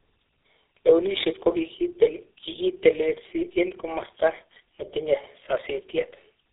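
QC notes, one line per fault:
throughout: tandem speech coding. Two low-rate speech coders in succession, which fits G.723.1 followed by GSM full rate over a G.711 link. The second re-encodes the first's errors, compounding roughness, muffling and warble, with nothing above 3.8 kHz.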